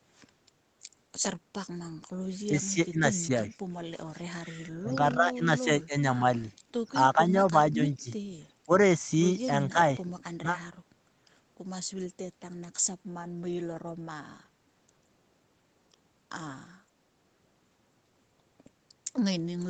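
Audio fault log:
2.07–2.22 s, background gated by the echo canceller: room sound drops by about 21 dB for 150 ms while the loudspeaker plays, as the canceller clamps the microphone.
2.5–3.59, 4.43–5.95, 7.15–8.1, 8.66, 9.69–10.46 s, speech suppressed in double talk: the talker dips or cuts out in pieces, roughly 10 to 20 dB down, likely because the canceller mistook overlapping talk for echo.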